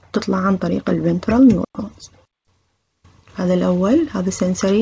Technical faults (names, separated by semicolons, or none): none